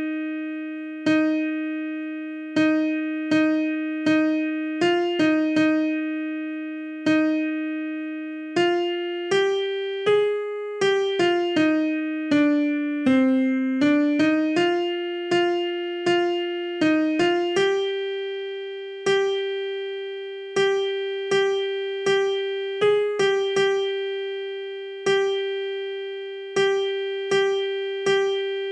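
From 15.66 to 19.52 s the treble dulls and a gritty, grainy noise rises, then clears. This is a Bluetooth SBC bit pool drop: the congested link starved the upper sub-bands and coarsened the rest, which fits the bit pool falling from 31 to 16, near 110 kbps.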